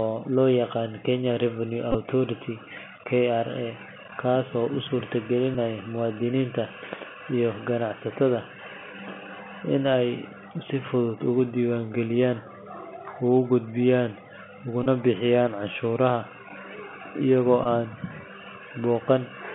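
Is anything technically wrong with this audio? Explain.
Yes. The speech has passed through a Bluetooth CVSD headset codec for its whole length. This delta-modulation scheme sends one bit per sample, which fits a 64 kbit/s stream, and each bit only says whether the waveform steps up or down while the step size adapts. The sound is confined to a narrow band of roughly 150 Hz to 3.4 kHz. The coding damage is plainly audible: a granular hiss sits under the speech, sibilants turn scratchy, and loud high-frequency content distorts where it changes faster than the step can follow.

There are also four Bluetooth headset packet repeats, where voice packets were lost on the link and the decoder replayed the previous packet's bits. At 1.91 to 1.96 s, about 22.5 ms of audio was lost across a 30 ms span, with the longest unbroken run around 20 ms. The 3.75 ms packet repetition gives that moment a brief buzz near 267 Hz. 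At 5.54 s the loss is about 7.5 ms, consistent with two packets. At 14.84 to 14.86 s, 22.5 ms is lost, and at 17.64 to 17.66 s, 15 ms is lost. Both produce short buzzy bursts before normal packets resume.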